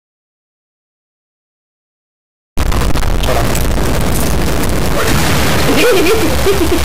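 Audio dropout to silence runs from the very start to 2.57 s: the clip opens already cut out, with silence and no room tone, before the sound enters mid-flow. The input was likely lost while recording continued, writing zeros in its place.

A stuck bit affects the whole clip, heard as grainy noise or harsh, buzzy distortion riding on everything, the opening gap included. One data bit is likely held permanently at 0 or 1, offsetting roughly half the samples by that bit's fixed weight.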